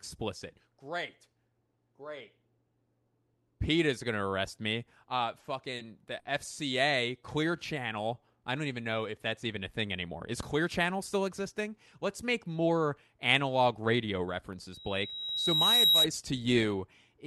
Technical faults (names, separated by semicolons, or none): short stall from a late packet; jitter buffer slow-down; jitter buffer speed-up; loudspeaker feedback squeal